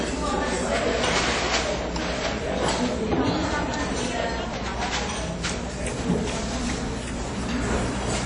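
From start to finish the audio carries coding damage of the kind produced by WMA compression, likely from an early WMA encoder working at a low rate, with the degradation consistent with roughly 32 kbps. The band stops at about 10.1 kHz, with nothing above it. Quantisation noise is smeared across long transform blocks, giving a ringing, washy quality, and weak spectral detail drops out, leaving a hiss that swells and recedes along with the sound itself.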